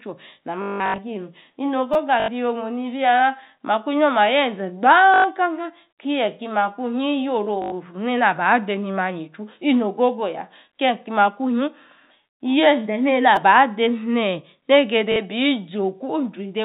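From 0.62 to 0.98 s, packet loss with the last packet repeated produces a robotic stutter. Lost 20 ms packets are filled with copies of the previous one, so the sound buzzes at 50 Hz, longest for about 180 ms. Shorter bursts follow at 2.2–2.28, 5.14–5.24, 7.62–7.72 and 15.12–15.16 s.

At 1.94 and 13.36 s, a repeated buffer gives a click or brief buzz. The same 5 ms piece plays three, then two, extra times. The repeats are far shorter and higher-pitched than the 50 Hz packet-loss buzz. All of this sits within telephone-band G.711 audio.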